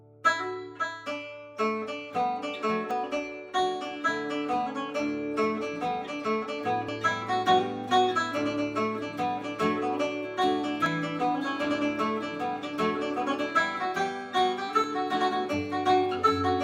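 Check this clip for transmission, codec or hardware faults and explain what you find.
Four short skips are audible. Audio missing between chunks at 2.91, 6.89, 10.86 and 14.84 s: every 4 s, roughly 20 ms likely drops at a chunk boundary, splicing the sides together as a jump.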